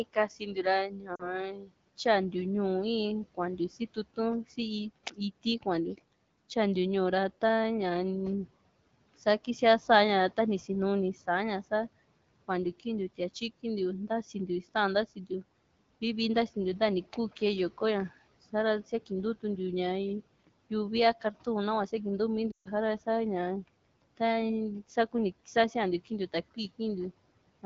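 From 0.04 to 1.72 s the noise suppressor cuts into the speech: it misreads quiet speech energy as background and pulls it down along with the noise, by about 19 dB at worst and over roughly a second in total, so soft consonants and word tails sound swallowed. Inside that span, at 1.16 to 1.34 s, lost AMR speech frames add a 40 ms gap, consistent with two dropped 20 ms frames. The decoder fills the gap by repeating the last good pitch and vocal tract parameters at falling gain, which is heard as a short dip.

The suppressor cuts in again from 3.35 to 4.18 s, with a drop of about 18 dB over roughly a tenth of a second, and from 4.96 to 5.66 s, again about 18 dB, for a slightly longer moment. Both times, brief quiet stretches of speech go faint.

At 22.51 to 22.68 s a longer burst of lost AMR speech frames removes about 140 ms, which points to a run of around seven frames. Concealment drops the sound to near silence within two frames, and the speech returns weak or rough for an instant.

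The last suppressor cut falls between 25.55 and 26.8 s, reaching about 16 dB and lasting a fraction of a second, and it again leaves quiet speech faint.

Throughout, room noise sits about 21 dB below the speech, and the AMR-WB coding sounds consistent with about 12.65 kbit/s.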